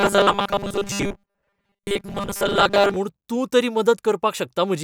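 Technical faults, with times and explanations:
0.01 to 2.97 s, robotic sound from repeated short buffers: the speech turns into a stiff, metallic buzz pinned at 200 Hz that only loosely tracks the words, clearing just before "म्हूण तूं तरी". That pitch is one over a 5 ms loop, so it's likely that audio was arriving too slowly and the playback kept replaying the last 5 ms chunk to fill the gaps. Most of that stretch is repeats rather than fresh audio.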